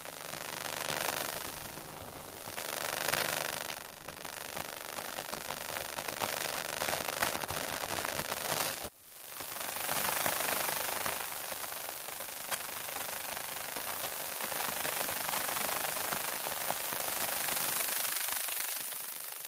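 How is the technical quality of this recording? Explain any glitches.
No glitches, dropouts or other technical faults are audible anywhere in this recording.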